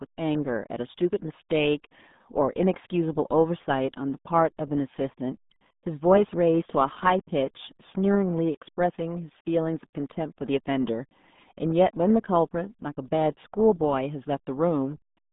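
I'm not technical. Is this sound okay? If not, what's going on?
No, it has the RealAudio 14.4 codec sound throughout: an old dial-up speech squeezer that strips everything above about 3.8 kHz, leaving the speech muffled and gargly.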